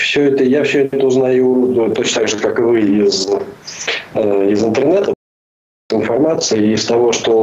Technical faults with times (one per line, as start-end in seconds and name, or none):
5.13-5.90 playback stall